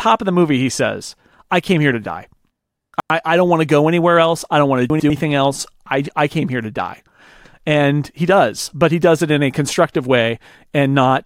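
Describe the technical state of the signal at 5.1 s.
At 5.1 s the speech is in a chunks-out-of-order fault spanning 4.9 to 5.1 s, between "I don't want to" and "else I I came". One 100 ms chunk plays a chunk late, swapping two segments; the three hard joins give a brief jumbled stretch.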